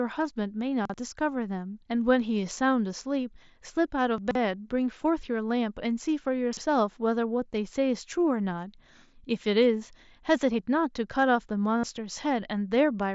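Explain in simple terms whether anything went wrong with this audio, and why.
Chunks out of order: at 0.85 to 0.94 s, 4.18 to 4.35 s and 6.53 to 6.61 s, a short piece of audio, about 43 ms long, plays late. Nothing is missing, but the sound briefly jumbles.

Concealed Bluetooth headset packet loss: at 11.78 to 11.83 s, about 60 ms of sound was lost. The gap is filled by repeating recent sound, so it gives a brief buzzy hold with a slight warble, not a shuffle.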